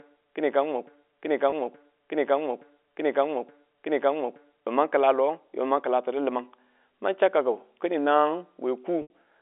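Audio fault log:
0.0–4.67 s, broken-record loop: a fragment about 0.87 s long plays back to back four times and is already repeating when the clip begins. The likely cause is a stalled player or stream resending the last piece it held, so the audio due in that stretch is lost.
1.50–1.52 s and 9.02–9.10 s, packet loss with pitch repetition: the receiver filled gaps of 20 ms and 80 ms by repeating the last pitch period. The short gap sounds like a briefly held buzzy tone. The longer one fades toward silence before the speech cross-fades back in, all within the narrow telephone band.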